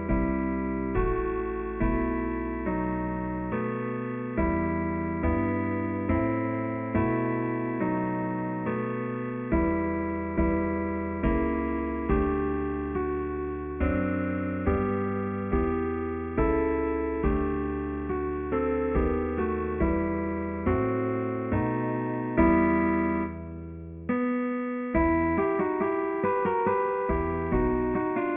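Aliasing runs throughout: the audio was downsampled to around 6 kHz with no anti-alias filter, so content above 3 kHz folds back as gritty, metallic tones well below the signal.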